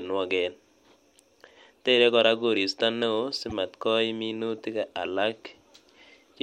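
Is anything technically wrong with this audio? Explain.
Yes. Corrupt frames were decoded at two points in this speech, at 3.50 to 3.52 s and at 4.58 to 4.60 s. Damaged bits were played back as if valid, spreading energy to wrong frequencies. Each is a short glitch, the first about -25 dBFS, the second fainter, about -40 dBFS.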